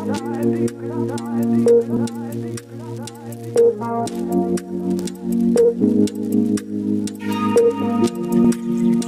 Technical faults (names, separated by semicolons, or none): compressed frames skipped